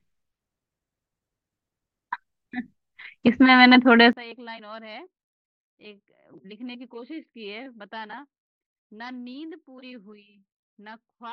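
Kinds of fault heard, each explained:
One channel inverted: from 4.13 s the mono speech drops about 25 dB, likely from reversed polarity cancelling shared content. The waveform shrinks and the spectrogram fades abruptly.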